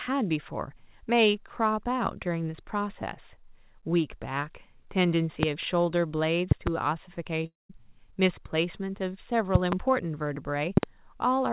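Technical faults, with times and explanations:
5.43–5.46, 6.51–6.70, 9.55–9.75 and 10.77–10.86 s, loud pop: There's a sharp pop at 5.43 s, then double pops in quick succession at each of the later spots, peaking around 20 to 25 dB above the speech, which carries on underneath. That's likely a sudden voltage step or pulse hitting the line, from a plug, switch, static or a driver glitch. The circuitry downstream shapes it into that hard thump.
7.46–7.71 s, long network dropout: About a quarter second of speech just never arrives. The receiver likely ran out of packets and papered over the gap by stretching the last bit of sound into a fading buzz, then fell back to silence before the audio picked up again further on, with that chunk simply gone. Everything has that narrow call-line sound with nothing above 4 kHz, which fits 64 kbps G.711 A-law.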